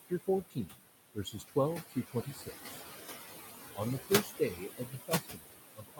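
In this speech clip, the room noise, sitting only about 8 dB below the voice, pumps throughout, sinking between phrases and swelling under them. These are noise suppressor artifacts: frame by frame, the processor pulls down whatever bands it judges to be steady noise by about 14 dB. Parts of the speech itself also go faint and swallowed at 0.50–0.81 s, 1.15–1.56 s, 1.89–2.81 s and from 4.0 s to the end at 6 s, with drops of about 17, 17, 15 and 22 dB. This is speech cut by the noise suppressor, which mistook quieter speech energy for background and turned it down with the noise, losing a fifth of a second in each of the first two spans, around half a second in the third and the deepest in the last.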